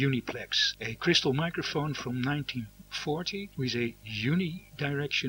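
A video or display buzz runs through the whole sound, roughly 25 dB below the signal: a 50 Hz buzz at the picture's field rate with hash above it, plus a 15.6 kHz line-rate whine. The gritty hash and high whine distinguish it from plain mains hum.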